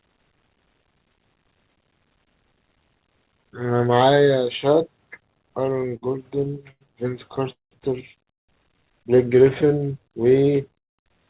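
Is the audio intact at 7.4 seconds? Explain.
No, 7.4 s sits inside a burst of repeated stalls (stutter) from 7.29 to 7.73 s. Packets arrived late, the jitter buffer kept running dry, and the receiver stretched the last sound to cover four gaps, the longest 193 ms. Nothing's lost, but about half that stretch is filler, so it drags and stutters.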